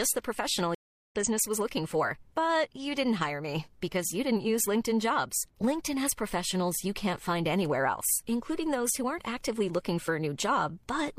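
Speech that drops out from 0.75 to 1.15 s, a gap of about 360 ms, then comes back at "business was looking for" with roughly 0.4 s of material skipped. That is a stream reconnect: the connection broke, the player restarted its decoder and rejoined the live stream further along.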